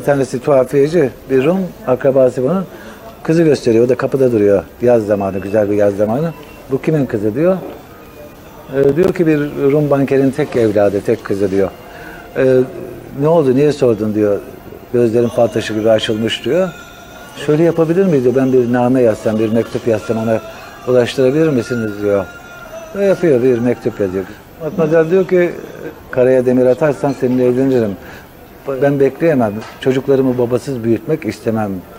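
From 8.84 to 9.09 s a short burst of gritty crackle tears across the sound, made of several tiny dropouts with hard edges. This is processor overload crackle: the processor missed a run of deadlines, around seven buffers of roughly 10 ms each, and each was left as silence.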